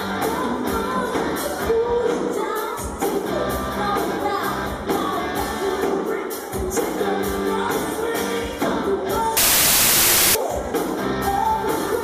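From 9.37 to 10.35 s the sound collapses into loud, harsh noise with the original faintly audible underneath, dragged down to 0.75 times its speed, with the pitch lowered to match. This is a wrong sample width fault. Samples written as 32-bit integers were read as packed 24-bit integers. Three-byte reads of four-byte data straddle sample boundaries, so most values are assembled from mismatched bytes and only some preserve the real signal's top bits. The extra samples stretch playback.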